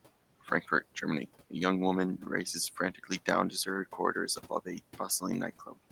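A speech recording with noise suppressor artifacts throughout. The suppressor pulls the room noise, which sits about 19 dB below the voice, down by about 17 dB between phrases and lets it rise under them. On a spectrogram, the background shows as patchy, blinking speckles rather than an even floor. Speech is also cut by the noise suppressor at 0.41–0.69 s, 2.95–3.28 s and 5.59–5.77 s, with drops of about 12, 10 and 16 dB over roughly 100 to 150 ms each. The suppressor mistook soft speech for noise, so those sounds come out faint and swallowed. On the waveform they appear as sudden dips in the envelope, and on the spectrogram as gaps in the weaker speech energy.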